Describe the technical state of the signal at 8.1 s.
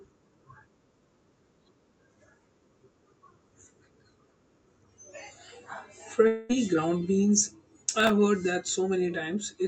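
A gritty burst of crackle tears across the speech from 7.9 to 8.1 s, between "ground beans" and "heard that". It is processor overload crackle: the processor missed several very short buffer deadlines in a row, each repeating a hard-edged sliver of old audio.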